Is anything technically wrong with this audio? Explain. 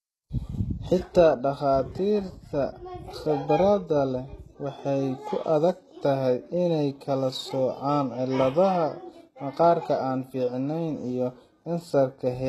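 Yes. Throughout the speech there is a hard ceiling at 12.4 kHz and clearly audible codec damage, likely HE-AAC compression at a very low bitrate around 16 kbps. The treble is rebuilt by copying lower bands upward, so s sounds come out gritty and metallic. A plain low-pass would sound dull; this stays bright but misaligned.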